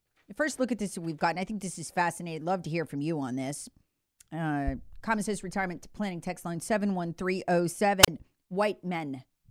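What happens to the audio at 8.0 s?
At 8.02 s the speech hits a wireless microphone squelch dropout lasting to 8.08 s. The radio signal fades and the receiver's squelch shuts the output. You get a quick burst of hiss, then a hole of near silence about 31 ms long, then the speech comes back.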